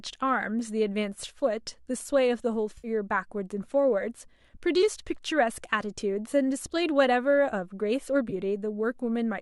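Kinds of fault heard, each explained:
AAC frame loss with concealment: frames went missing and the decoder filled the gap from the last good spectrum, leaving a smeared, noisy patch in the speech at 2.78 to 2.88 s (about 60 ms lost) and a briefer one at 8.30 to 8.33 s.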